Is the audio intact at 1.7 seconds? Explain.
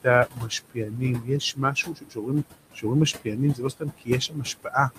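No. At 1.7 seconds the speech sits inside a stretch of speech cut by the noise suppressor, running from 0.7 to 2.46 s. The suppressor mistook quiet parts of the speech for background and turned them down with it, by up to about 20 dB, so soft consonants and endings sound swallowed or faint for about a second in total. Unlike a dropout, the sound thins and fades rather than stopping abruptly into silence.

Noise suppressor artifacts are also present here, as they are across the whole clip. The suppressor lowers the bands it judges to be steady noise, by about 20 dB, frame by frame. The room noise, about 11 dB under the speech, isn't a fault in itself. What gives the suppressor away is that this noise bed sinks in the gaps and swells under speech.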